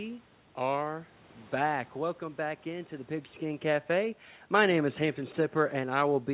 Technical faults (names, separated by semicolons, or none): none